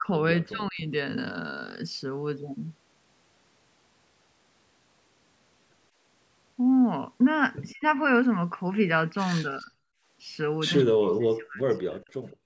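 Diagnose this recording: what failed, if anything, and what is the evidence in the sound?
The call processing's echo canceller likely misread both sides talking at once and turned the near talker down with the echo. The speech dips at 0.0–0.83 s, 7.72–7.84 s, 9.42–9.7 s and 10.84–12.1 s, by roughly 15 to 40 dB, the last stretch losing about a second. This is speech suppressed in double talk.

The same echo canceller's suppressor closed hard on the microphone while the far end's loudspeaker signal was active. The room background drops briefly at 9.98–10.07 s, by about 18 dB, and at 12.38–12.45 s, by about 30 dB, then returns as it releases. This is background gated by the echo canceller.

At the far end, a loudspeaker's sound was likely not fully cancelled and was returned. This echo leak shows as short, faint copies of the speech arriving 159 ms late, at 10.78–10.83 s and 12.3–12.37 s, roughly 20 to 30 dB below the direct speech.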